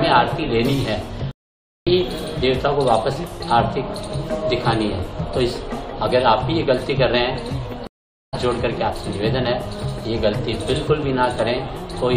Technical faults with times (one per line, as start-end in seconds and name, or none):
1.31-1.87 stream reconnect
7.87-8.34 stream reconnect